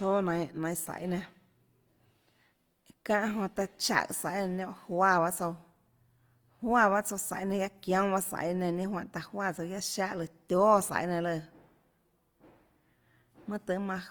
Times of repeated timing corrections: none

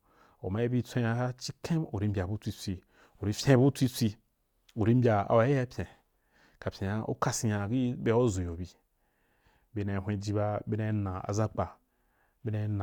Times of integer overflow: none

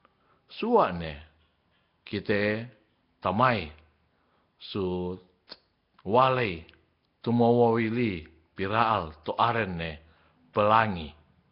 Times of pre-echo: 10.53-10.55

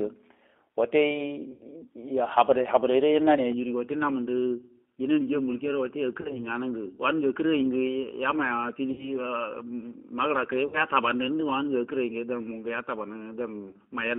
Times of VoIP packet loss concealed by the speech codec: 1.54-1.63, 6.21-6.43, 8.92-9.12, 10.67-10.80, 13.69-13.76

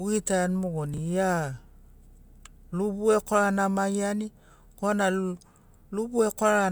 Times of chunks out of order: 0.94-0.98

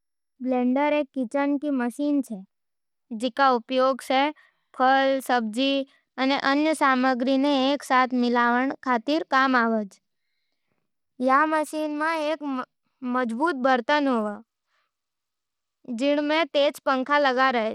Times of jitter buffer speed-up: none

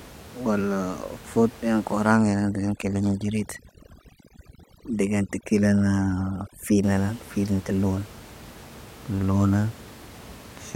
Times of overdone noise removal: 2.15-6.83

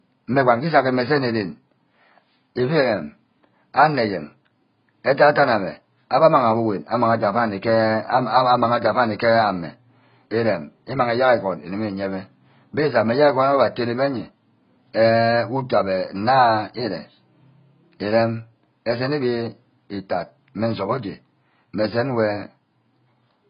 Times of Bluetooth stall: none

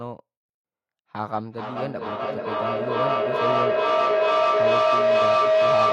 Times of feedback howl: 1.32-5.92

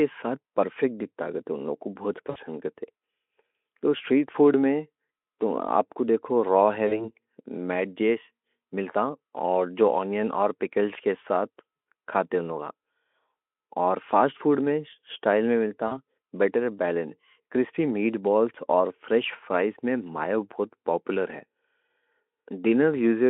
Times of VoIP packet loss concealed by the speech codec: 2.29-2.37, 6.87-7.06, 15.87-15.98

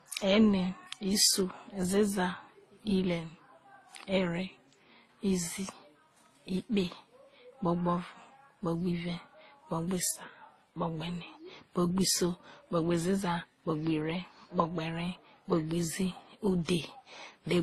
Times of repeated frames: none

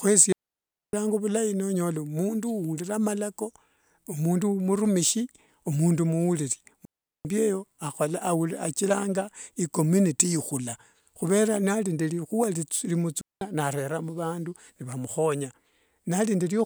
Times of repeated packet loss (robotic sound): none

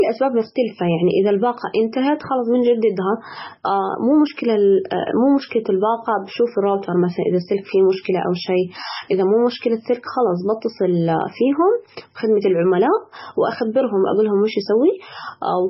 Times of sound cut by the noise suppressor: none

